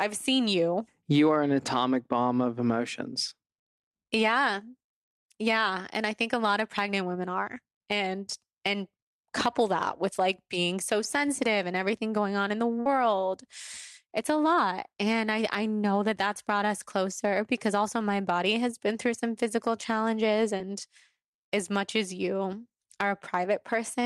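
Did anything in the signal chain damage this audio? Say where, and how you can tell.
Yes, the network stage. At 12.80 to 12.86 s there's a burst of packet loss: about 50 ms went missing, and the receiver stretched the last sound into a fading held tail before jumping ahead. You can hear the skip where the real audio picks up again.

Also on the network side, there's a short concealed packet loss at 20.57 s. Roughly 20 ms never arrived in time, so the decoder bridged it by extrapolating the preceding sound and crossfading back. It comes through as a quick smear or wobble.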